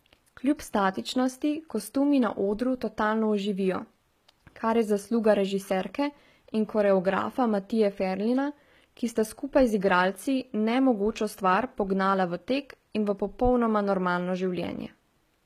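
From start to finish the speech has a bright but artificial top end: sibilants come out gritty and metallic, and nothing is present above 14.9 kHz. This is likely HE-AAC compression at a very low bitrate, around 20 kbps, with the damage plainly audible. Only the lower spectrum is coded; the treble is rebuilt by copying lower bands upward under a coarse envelope, so its harmonics no longer line up with the real ones below.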